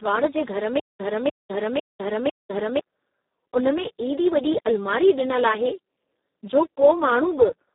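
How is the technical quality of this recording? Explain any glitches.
The technical quality is poor. The speech is heavily degraded by a low-rate codec throughout, and there is a stutter early in the clip.

Speex codec, throughout: The speech sounds hoarse, buzzy and partly robotic. The band runs only from about 250 Hz to 3.7 kHz, with nothing above 3.8 kHz. That damage fits Speex at a setting near 4 kbps. At that rate the CELP coder has too few bits to model the excitation properly, so voiced sounds lose their natural texture and turn noisy and synthetic.

Stutter with silent gaps, 0.80 to 2.80 s: Right after "जे घर", a burst of about 297 ms plays, followed by about 202 ms of digital silence. The pattern repeats every 500 ms, four times in all. This is likely a stalled player or stream that replayed its last fragment on each retry and then ran empty. The speech that should have filled those two seconds is missing.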